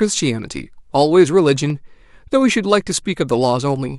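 Three sharp clicks cut through the speech, at 0.43, 1.70 and 2.91 s. Each is likely dropped samples: under half a millisecond goes missing, so the waveform jumps abruptly.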